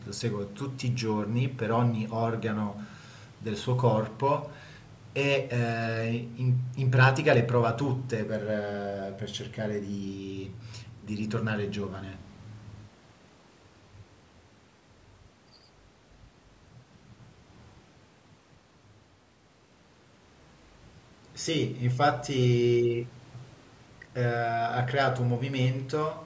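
The speech carries no technical faults, and the only shaping is the usual call microphone processing, which trims the lowest bass and leaves nothing above 8 kHz.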